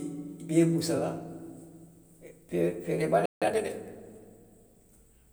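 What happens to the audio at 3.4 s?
The speech cuts out in a playback stall from 3.26 to 3.42 s. It falls silent for about 160 ms, likely because the player ran short of data. Time-compressed catch-up follows from 3.42 to 3.74 s. Small pieces are cut and cross-faded, so the speech runs 1.5 times fast at normal pitch.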